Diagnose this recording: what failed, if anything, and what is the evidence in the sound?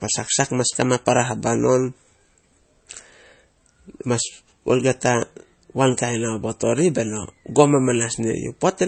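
The failure sits at the codec stage. For the whole 9 seconds of speech, nothing is present above 8.3 kHz, and the smeared, watery artefacts of a heavily squeezed MP3 run throughout, which fits a 32 kbit/s encode. This is likely low-bitrate audio saved at a high bitrate, around 192 kbit/s. Unlike a genuine high-bitrate file, the top band is simply empty, and the old artefacts remain rather than being cleaned up by the larger file.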